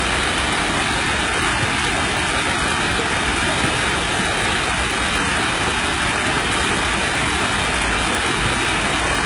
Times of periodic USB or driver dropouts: 0.68-9.15

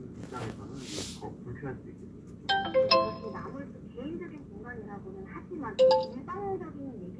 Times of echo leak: none

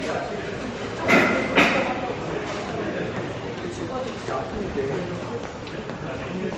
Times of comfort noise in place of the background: none

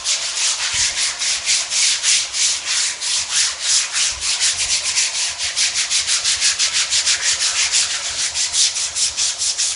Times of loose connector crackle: none

